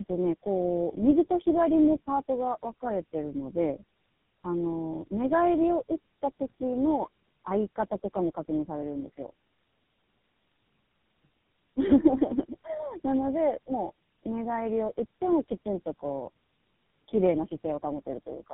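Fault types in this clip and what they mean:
Tandem speech coding: three low-rate speech codecs in series re-code already degraded speech, leaving it rough, muffled and warbly, with nothing above 3.8 kHz throughout.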